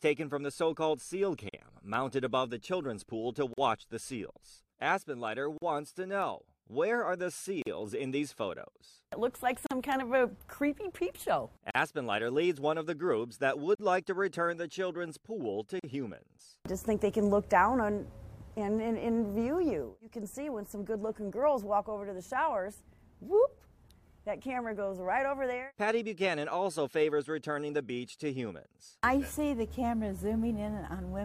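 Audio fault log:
1.49, 3.53, 5.58, 7.62, 9.66, 11.71, 13.75 and 15.79 s: gap at a join of encoded pieces. Separately encoded segments were joined untrimmed, keeping each run's start-up delay and last-frame padding. Every 2 s, a 40 to 43 ms gap cuts continuous sound, edges smeared, then resumes where it stopped.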